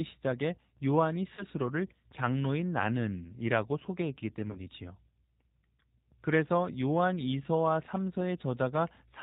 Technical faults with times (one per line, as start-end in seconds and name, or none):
0.00-9.23 G.729 codec
1.36-1.44 VoIP packet loss concealed by the speech codec
4.51-4.60 VoIP packet loss concealed by the speech codec